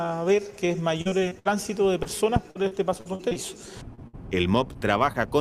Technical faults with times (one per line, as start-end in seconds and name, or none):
1.01-1.47 repeated packet loss (robotic sound)
2.03-2.07 short concealed packet loss
2.51-3.37 repeated packet loss (robotic sound)
3.95-3.99 short concealed packet loss
4.07-4.15 burst of packet loss
4.73-4.77 short concealed packet loss
5.13-5.16 short concealed packet loss